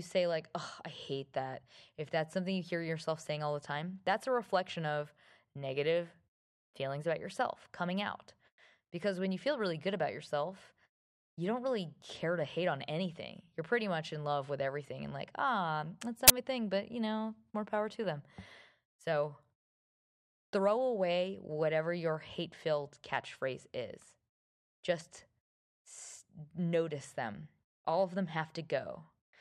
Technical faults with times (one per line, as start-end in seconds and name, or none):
16.28-16.30 uninitialised buffer